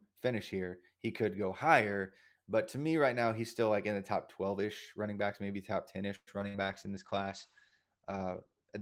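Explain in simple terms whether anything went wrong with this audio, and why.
Yes, several things go wrong, all packed into the last few seconds of this speech.

At 6.15 s there is a call audio freeze, lasting about 0.13 s. The last sound is stretched into a fading buzz for about 115 ms, including roughly 50 ms of near-silence, and then the speech picks up exactly where it left off. The likely cause is network packets held up in transit, so the receiver ran out of audio and had to wait. Nothing is lost. The speech is simply pushed later by about 115 ms. That sets it apart from the loss faults that follow.

At 6.39 s a short concealed packet loss goes by in a blink, about 30 ms in total. Roughly 20 ms of real audio never arrived, and the receiver covered the hole with about 10 ms of continued sound. The result is a tiny smear or wobble rather than a pause, and a short consonant could disappear inside it.

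From 6.48 to 6.57 s a burst of packet loss removes about 60 ms of speech in a row. The receiver filled roughly that much with a held, fading continuation of the previous sound, and then the speech resumes further along. Unlike the freeze, a piece of the speech really is missing here. The glitch is also longer than the smear just before it.

From 6.62 s to the end, a call bitrate drop makes the voice sound rougher and more muffled. The connection told the encoder to squeeze the audio much harder. It also cut the highest frequencies, so the sound now stops at about 8 kHz instead of reaching 20 kHz. This lasts for over two seconds rather than being a brief blip, and nothing is skipped or repeated.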